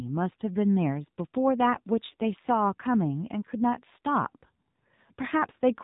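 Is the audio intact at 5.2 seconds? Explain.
No. At 5.2 s, as everywhere in the speech, the AMR narrowband mobile codec is audible: nothing passes above about 3.8 kHz, and the vocal-tract model, driven by sparse pulses per 5 ms, gives a buzzy, synthetic quality consistent with a low bitrate near 7.4 kbps.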